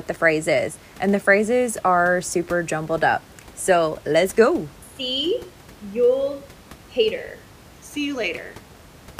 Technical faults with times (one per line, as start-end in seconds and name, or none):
none